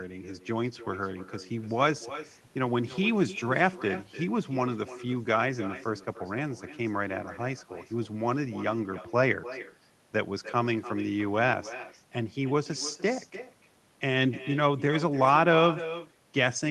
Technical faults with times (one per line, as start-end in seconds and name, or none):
0.00-16.70 echo with no canceller